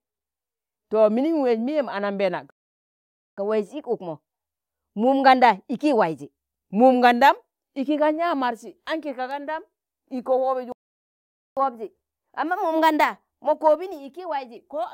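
At 2.50 s the speech cuts to silence for 0.87 s, then resumes where it stopped. This is a playback stall, likely the player running out of data or its thread being blocked. From 3.38 to 6.38 s the speech runs quick and higher, 1.1 times speed and roughly a semitone and a half up. This is catch-up at higher speed: the player resamples its backlog to recover lost time. The same pair recurs, with a 0.85 s stall from 10.72 to 11.57 s and catch-up from 11.57 to 14.57 s.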